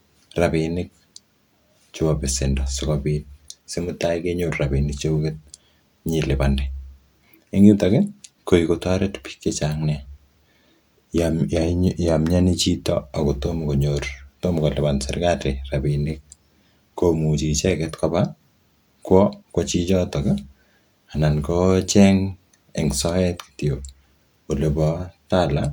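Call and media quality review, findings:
Nothing to flag on this speech recording, no faults heard anywhere in it.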